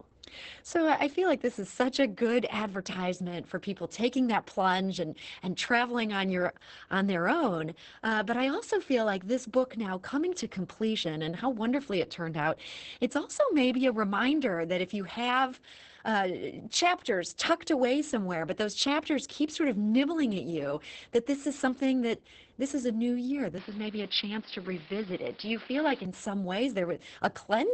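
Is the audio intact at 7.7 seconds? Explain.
No. At 7.7 seconds the speech carries Opus voice compression, present throughout the clip. The SILK linear-prediction coder models the vocal tract and codes the excitation coarsely, so the speech sounds muffled, hoarse and slightly robotic, which fits a bitrate near 10 kbps. On a spectrogram, energy stops sharply around 8.5 kHz, with smeared harmonics below. The waveform's envelope looks intact, but the fine detail is simplified.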